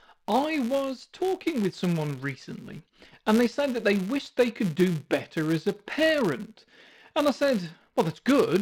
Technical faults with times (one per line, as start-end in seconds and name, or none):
0.00-8.61 filter restarted on every block